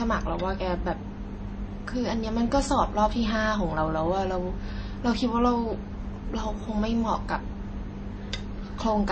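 All the way through, the speech has two kinds of compression damage layered together: smeared, watery detail with a second codec's swirl on top, and nothing above 8.9 kHz. That points to likely transcoding between lossy codecs, roughly low-rate MP3 re-encoded as HE-AAC.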